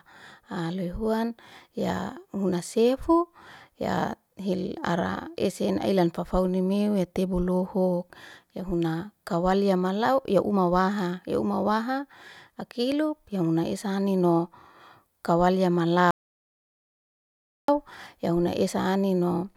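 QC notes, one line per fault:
16.11–17.68 s, audio dropout to silence: the speech cuts off abruptly after "kawal ya" and resumes mid-flow at "ya huna", leaving about 1.58 s of dead digital silence with no room tone or noise floor underneath. That total absence of background marks it as lost input, likely a disconnected device, failed link or brief mute, rather than a natural pause or a noise gate, which would keep some ambience or fade gently. Whatever was said in that gap is gone.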